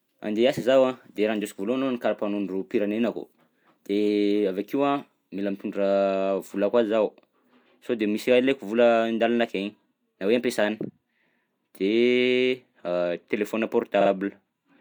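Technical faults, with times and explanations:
14.00 to 14.10 s, repeated frames: A short stretch of the compressed speech is played again, so the sound stutters near the end of the clip. The repeating block is about 36 ms long, which fits a run of two compressed frames, and it is heard two extra times before playback moves on. The decoder reproduces the duplicated frames faithfully, so the same fragment recurs and the clip grows by about 93 ms.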